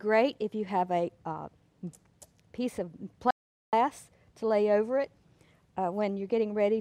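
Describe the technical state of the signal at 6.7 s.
At 6.7 s the audio is intact, with no dropout, click, distortion or other fault at that point.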